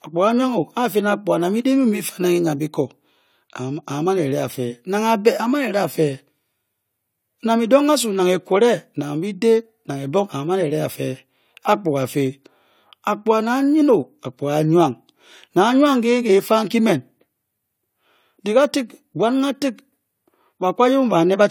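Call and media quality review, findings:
No faults found in the speech audio.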